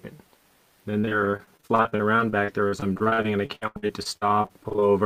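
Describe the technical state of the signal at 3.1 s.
Choppy, with small pieces of the sound dropping out: at 3.1 s the signal sits inside a stretch of repeated packet loss (robotic sound) running from about 0.99 s to 4.84 s. Around forty separate holes occur across that span, the longest about 79 ms. Each is patched by extending the last received sound, and the next hole arrives soon after, so roughly 28% of the stretch is concealed rather than genuine audio.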